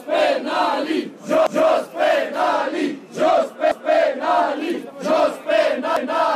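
A stutter recurs at 1.47, 3.72 and 5.97 s, each replaying 0.25 s of sound: overlapping chunks, where every 2-second chunk restarts before the previous ended.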